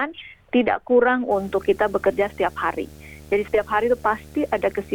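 From about 1.31 s to the end there's video or display buzz: a monitor or video cable is coupling into the audio, giving a 75 Hz buzz at the display's field rate with hash riding on top, sitting roughly 25 dB under the sound.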